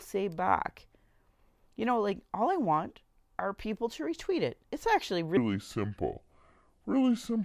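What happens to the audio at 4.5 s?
At 4.5 s the speech carries on intact, with no dropout, click, distortion or other fault at that moment.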